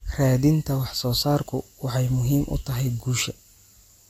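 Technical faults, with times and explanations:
1.43 s and 3.19 s, dropped buffer (overrun): The likely cause is a program that fell behind in collecting its input, so the hardware overwrote a stretch of samples before they were read. Roughly 10 ms is lost just after "wax soo" and roughly 5 ms just after "u tahay". The audio on either side of each gap is joined directly with no silence between, so the sound jumps forward abruptly at each point.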